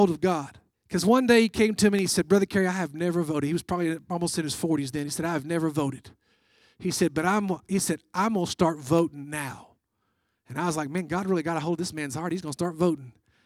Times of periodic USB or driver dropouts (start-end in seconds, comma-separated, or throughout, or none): 0.48-12.98